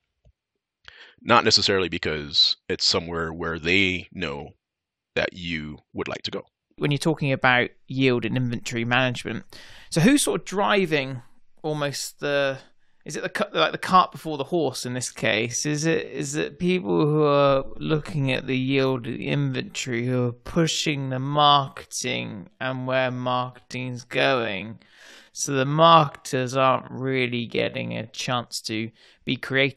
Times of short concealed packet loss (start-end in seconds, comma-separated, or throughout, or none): none